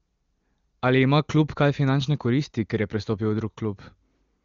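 Nothing stood out on listening to this speech, which comes through the AMR wideband (HD Voice) codec at its highest rate, with content reaching up to roughly 7 kHz.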